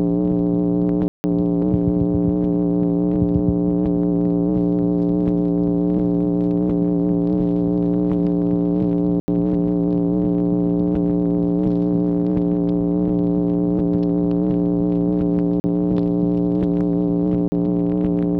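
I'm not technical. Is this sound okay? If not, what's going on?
No. The sound drops out four times, each a block of digital silence where the sound is cut off abruptly: 1.08–1.24 s (160 ms), 9.20–9.28 s (80 ms), 15.60–15.64 s and 17.48–17.52 s (40 ms each).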